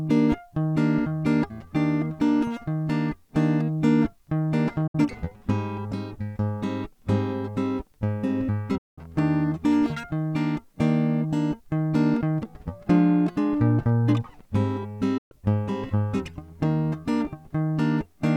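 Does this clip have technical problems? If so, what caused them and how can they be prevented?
Yes. The music has three digital broadcast dropouts: at 4.87 to 4.95 s, 8.78 to 8.98 s, and 15.18 to 15.32 s. Each is a brief mute with an 8 ms fade. The holes last 64, 192 and 128 ms, multiples of 32 ms, which suggests whole frames were discarded. The receiver lost the signal or rejected corrupted frames and muted until valid ones arrived, so that audio is gone. Better reception, a stronger signal, or a more robust transmission mode would prevent it.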